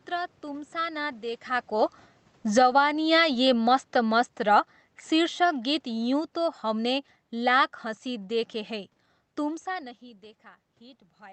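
A speech clip where the level keeps getting pushed around by automatic gain control, and you can tell it's the gain rather than the talker because the room noise rides up and down right along with the voice. There's an automatic gain falling from 1.71 to 2.83 s, pulling things down by about 12 dB, shortly after the talker shifts position around 1.5 s. Then automatic gain rising kicks in from 2.74 to 3.48 s, swelling voice and background back up by about 7 dB as it decides the signal has gone too quiet. That rise barely settles before a second, slower automatic gain falling runs from 3.51 to 7.75 s, easing everything down by about 7 dB over roughly four seconds, and it's finished by the time you hear "हँसी देखे हैं तुमसा". So what you get is a pumping, see-saw level from about 1.7 to 7.75 s. Around 9.5 s there's another change in level from the talker moving relative to the mic, but that one's just the voice, without the background coming along.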